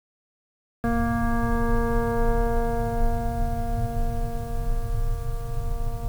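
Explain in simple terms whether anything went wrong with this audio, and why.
The music has a cut-off start: silence until 0.84 s, then it jumps in mid-sound. Unlike a gentle fade-in, nothing builds up, because recording began late.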